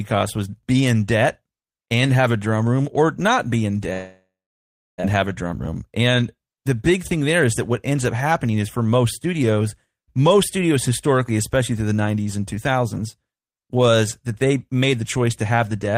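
Speech clip with two network faults. From 3.93 to 5.06 s, after "or not be in", the audio turns to a fading buzz and then about 0.66 s of silence, returning at "have a drum" with about 1 s of speech gone. That is likely a long network dropout, not a brief glitch. Between 5.63 and 6.09 s the speech runs at 109% speed without any pitch rise, a jitter buffer speed-up trimming roughly 50 ms to recover delay.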